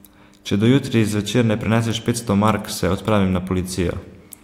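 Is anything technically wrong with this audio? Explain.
No, nothing technically wrong can be heard in this speech recording; the signal stays intact and stable throughout.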